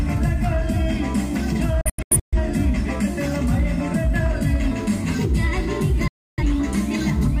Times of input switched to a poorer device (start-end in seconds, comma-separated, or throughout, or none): none